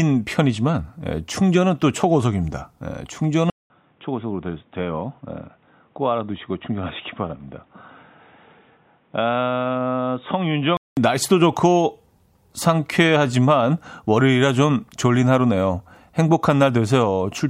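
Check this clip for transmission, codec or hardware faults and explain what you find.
One hardware-type fault is present.

From 3.5 s to 10.97 s the speech turns dull and boxy, likely an input switched to a poorer device. A 200 ms silence marks the switch. The new path passes nothing above 3.8 kHz, sits a few decibels quieter, and adds its own faint background noise, roughly 40 dB below the speech. A spectrogram shows the upper band cut off flat for that stretch. The waveform shows a brief gap and a smaller envelope until full bandwidth returns.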